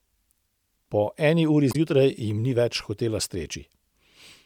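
A brief glitch cuts across the speech from about 1.69 to 1.75 s, lasting roughly 70 ms before the audio carries on. It comes from damaged data in a compressed stream: a short run of bytes in the encoded file was lost, zeroed or overwritten, so the decoder could not make sense of the frames there. It lost sync and searched for the next valid frame header, leaving a chirp, click or short hole in place of the intended sound.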